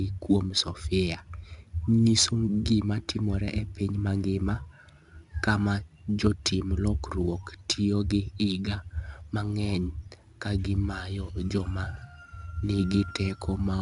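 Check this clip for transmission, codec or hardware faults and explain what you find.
One codec fault runs through the whole speech clip: 4-bit ADPCM compression, and the damage is plainly audible. Each sample is coded as a coarse 4-bit step from a prediction, so quantisation error rides along as a gritty hiss that swells with every loud syllable and roughens sharp onsets. Nothing appears above 10.6 kHz, pointing to about 22 kHz sampling. A spectrogram would show a hard ceiling there and a level-tracking noise floor filling the gaps between harmonics, with a fuzzy waveform on peaks.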